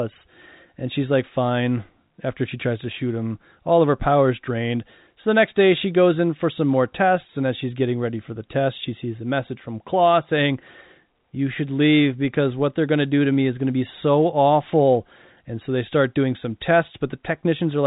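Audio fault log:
The speech sits in a narrow telephone band with nothing above about 3.8 kHz, consistent with G.711 A-law coding at 64 kbps, and the signal shows no technical faults.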